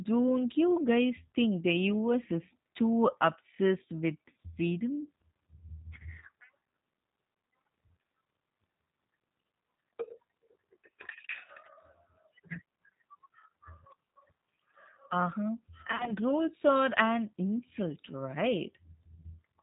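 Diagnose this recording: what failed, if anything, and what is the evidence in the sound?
The codec stage is at fault for the whole clip. This speech is band-limited with nothing above 4 kHz, and it has a rough, slightly synthetic texture, which plainly fits the G.729 codec, most likely the G.729A variant at 8 kbit/s. The coder does not send the waveform. It sends a vocal-tract filter, a pitch predictor and a sparse pulse excitation every 10 ms, and the decoder rebuilds speech from those parameters. The graininess comes from that rebuilt excitation.

The network stage shows VoIP packet loss concealed by the speech codec. From 15.88 to 16.13 s, just before "rules are an insult", the speech turns stretched and smeared in bursts. The gaps fit about 90 ms of lost audio scattered over roughly 180 ms, with the longest run near 40 ms. A shorter dropout at 19.14 to 19.22 s fits about 30 ms missing. 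For each missing frame the decoder repeats its last pitch and filter at falling gain, so the voice stays weakened briefly after packets resume.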